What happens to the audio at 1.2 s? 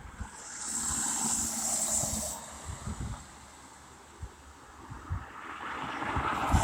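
At 1.19 to 1.22 s, compressed frames are skipped. The decoder drops whole frames and the sound jumps ahead by roughly a tenth of a second, which fits about five 20 ms frames.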